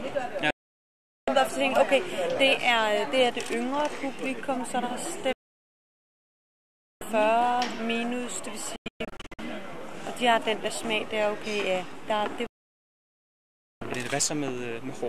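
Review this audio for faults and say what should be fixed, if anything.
Digital broadcast dropouts occur at 0.50–1.28 s, 5.33–7.02 s, 8.76–9.39 s and 12.47–13.82 s. Each time the receiver lost good frames, it faded to silence in about 3 ms and muted until valid frames returned. At 8.76 s the loss breaks into several short holes, the longest about 120 ms. Clean, whole silences mark these as muting rather than crackle. Better reception or stronger error protection would prevent them.

Processor overload crackle occurs at 10.64–10.85 s and 14.08–14.19 s. Each burst is a run of buffers a few milliseconds long that were skipped because they missed their deadline. The result is gritty tearing laid over the sound, not a clean silence. Reducing processing load or enlarging the buffer would prevent it.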